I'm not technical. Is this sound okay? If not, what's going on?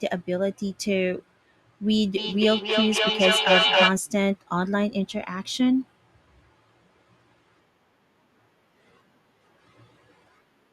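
No. There is a feedback echo between two devices from 2.18 to 3.98 seconds. Two devices in the same room are on the call, and one plays aloud what the other's microphone picked up. That microphone hears it again and sends it round once more. Each device's echo removal only cancels its own playback, so the sound returns about every third of a second, and the repeats build up until they are louder than the speech itself.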